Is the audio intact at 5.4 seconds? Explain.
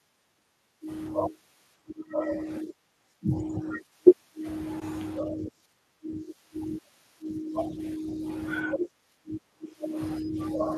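No. At 5.4 s the speech sits inside a stretch of speech suppressed in double talk, running from 5.21 to 6.27 s. Over roughly 0.7 s of that span the level dips, falling by around 10 dB at its deepest. The likely cause is an echo canceller facing simultaneous talk from both ends: unable to tell this talker apart from loudspeaker echo, it attenuates everything, including the wanted speech.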